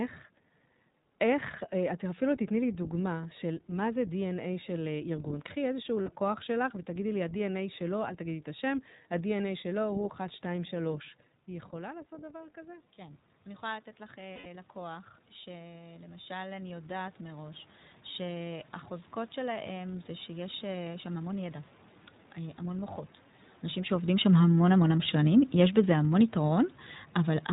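Throughout the recording, the speech passes through the iLBC codec, which fits its 15.2 kbps mode with 20 ms frames. Nothing above 4 kHz survives, and the voice has a plainly rough, synthetic edge.

From 6.02 to 6.09 s, lost iLBC frames leave a 60 ms gap. The decoder fills it by repeating the last pitch cycle mixed with noise, which sounds like a brief buzzy, held vowel before the voice snaps back.

Around 11 s the talker moves back and the level drops. Starting at 10.54 s, the automatic gain rises to compensate, lifting voice and room noise together by about 12 dB in a slow swell that lasts until 17.68 s.

Inside that swell, from 14.34 to 14.46 s, more lost iLBC frames cause a longer 120 ms concealment. The repeated cycle fades, giving a breathy, droning smear before the speech recovers almost immediately.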